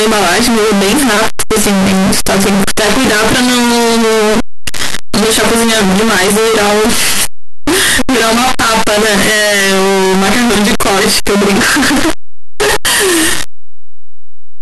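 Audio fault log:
throughout, signed and unsigned mixed up: the speech becomes a loud, harsh buzz with soft sounds as loud as voiced parts, likely because 8-bit samples were read with the wrong sign convention, so every zero crossing leaps across the full range. Plain 8-bit grain would stay quiet in pauses.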